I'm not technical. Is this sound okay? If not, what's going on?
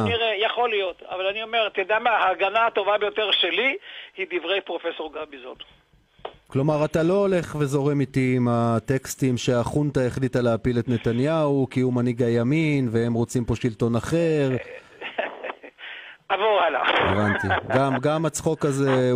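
Yes, nothing in the signal points to a technical problem: there are no dropouts, distortion or glitches anywhere in it.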